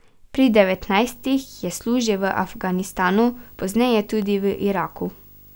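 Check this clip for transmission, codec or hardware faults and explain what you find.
There is one fault: video or display buzz. It begins at 0.37 s and runs to the end of the clip. A screen or video cable is leaking its signal into the audio path. The picture refreshes 50 times a second, so a 50 Hz buzz sits under the speech, with gritty hash riding on top. A thin, piercing whine near 15.6 kHz also comes from the line scan. The interference sits about 25 dB below the speech.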